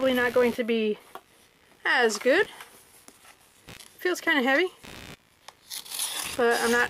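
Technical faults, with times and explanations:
Throughout, computer activity noise: pulsing interference at roughly 70 Hz, about 25 dB below the signal, as processor or peripheral load shifts the audio circuit's shared ground.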